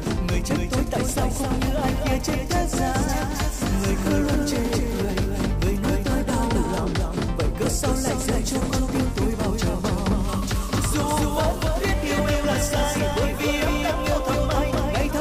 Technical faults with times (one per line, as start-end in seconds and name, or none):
0.00-15.21 doubled audio track